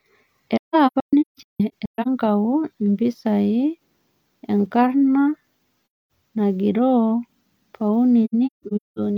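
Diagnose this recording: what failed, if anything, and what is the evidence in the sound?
Codec stage, AAC frame loss with muting: lost frames are zeroed, so speech fades out and back in, in gaps across 0.57–2.08 s, 5.89–6.09 s and 8.24–8.99 s.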